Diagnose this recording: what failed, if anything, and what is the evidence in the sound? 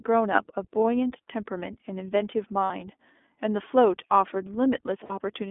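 The codec stage is at fault: the speech has passed through the iLBC codec, which fits its 15.2 kbps mode with 20 ms frames. The line band runs from 250 Hz to 3.5 kHz, so everything above is missing, and the plainly audible coding damage gives the speech a rough, synthetic texture.

At the network stage, lost iLBC frames cause three brief gaps: at 0.36 s, 2.64–2.71 s and 5.04–5.12 s. The first fits one lost 20 ms frame, and the later two fit about 60 ms each. The decoder fills each gap by repeating the last pitch cycle with noise, heard as a held buzzy vowel, and the voice is right again almost at once afterwards.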